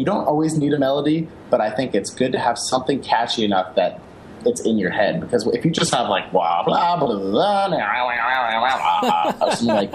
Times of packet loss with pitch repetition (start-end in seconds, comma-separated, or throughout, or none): none